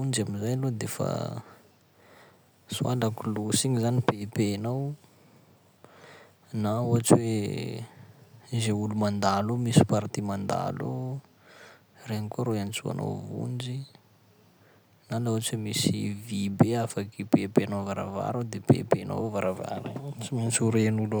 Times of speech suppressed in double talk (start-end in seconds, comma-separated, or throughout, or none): none